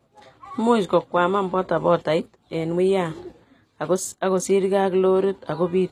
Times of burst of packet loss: none

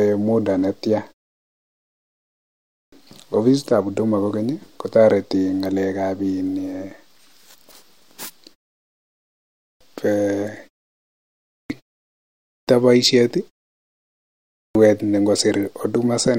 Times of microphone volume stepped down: none

